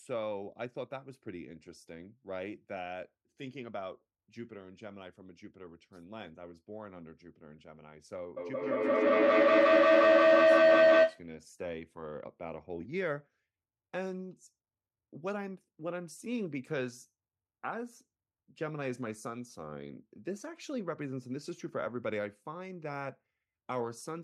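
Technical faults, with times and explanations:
8.37–11.32 s, feedback howl: a loudspeaker-to-microphone loop gains each trip, swelling into a tone near 700 Hz, about 15 dB above the speech, with the loop repeating roughly every 150 ms.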